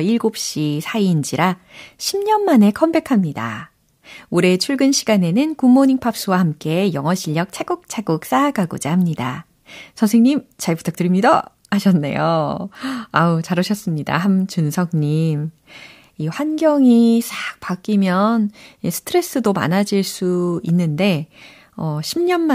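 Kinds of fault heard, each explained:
No technical faults detected anywhere in the speech recording.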